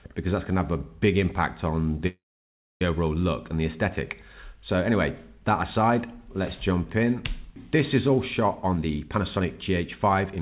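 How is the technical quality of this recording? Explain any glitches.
The recording has two timing glitches, heard through a narrowband call path with nothing above 4 kHz, which fits G.711 mu-law coding.

Call audio freeze, 2.07 to 2.82 s: packets likely stalled and the jitter buffer ran dry. The last sound trails off, then about 0.62 s of silence follows before the audio resumes intact.

Jitter buffer speed-up, 8.64 s to the end: the receiver trims pitch-period slices to shed roughly 0.4 s of excess delay, so the sound runs about 119% fast at unchanged pitch.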